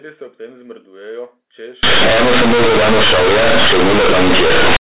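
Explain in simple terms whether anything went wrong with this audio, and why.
From 1.83 to 4.77 s, companded audio was read as linear: telephone-coded mu-law speech was played back without being expanded, so quiet parts blast as loud as shouting, with harsh, buzzy distortion throughout.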